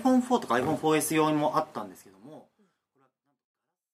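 No technical faults can be heard in the audio. From roughly a second and a half onward the level eases smoothly down toward the end, a deliberate fade-out with no step or click.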